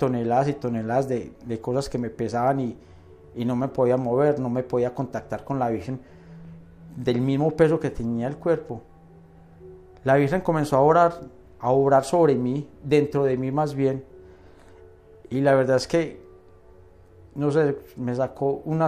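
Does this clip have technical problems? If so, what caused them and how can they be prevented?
No, there are no technical faults to point to in this clip. With nothing going wrong, there is no cause to trace and nothing that needs preventing.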